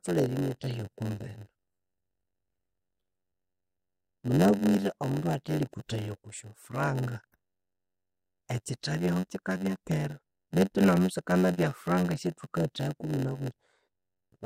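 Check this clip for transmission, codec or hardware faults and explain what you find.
There is one fault, and it runs through the whole speech clip. It is a block size mismatch with padding. One stage writes shorter blocks than the next one reads. Zeros fill the remainder. Each block gets a short gap. This produces a buzz at about 92 Hz. Speech runs at 0.919 times normal speed, with timbre roughly unchanged.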